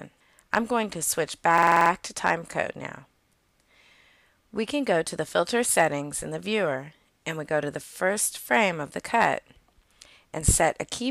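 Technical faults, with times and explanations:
1.58–1.90 s, system hang loop: the playback system briefly froze while the sound hardware kept replaying the same ring buffer, so a single 46.44 ms slice of audio repeats exactly 7 times before normal playback resumes, with essentially nothing skipped afterwards. The loop length fits a 2048-sample buffer. Repeating at 21.5 Hz, the identical fragment is heard as a rapid, mechanical stutter, a rattling burr locked to the loop rate, rather than a steady tone.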